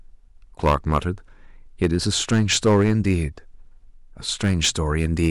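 Hard clipping breaks up this speech clip in three stretches: 0.64 to 0.98 s, 1.83 to 3.15 s, and 4.44 to 5.30 s. In each, the level is driven past what the signal path can carry, by about 10 dB, 8 dB and 7 dB respectively. The waveform peaks are sliced flat, and those squared-off tops add harmonics high in the spectrum. The result is a harsh, buzzy fuzz on the louder syllables, strongest in the first stretch.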